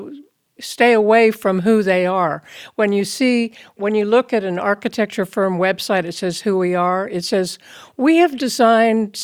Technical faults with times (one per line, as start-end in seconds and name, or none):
none